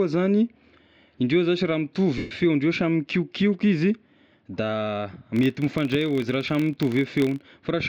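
Lost LE Audio frames occur from 2.18 to 2.31 s, right after "indreo zashy raha". For roughly 0.13 s the LC3 decoder filled the gap by replaying the last spectrum with randomised signs and fading it, so the speech turns into a brief noisy smear.

A filter restarted on every block runs from 5.36 to 7.44 s. The filter drops its memory at each block boundary and starts from silence, leaving a small transient every time. These form a buzz at about 43.1 Hz, which fits a 1024-sample block, and it rises and falls with the speech level.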